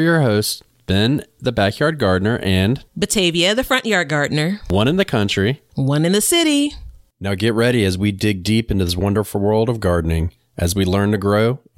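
Nothing went wrong technically anywhere in this stretch of speech, so there's no fault to point to at any moment.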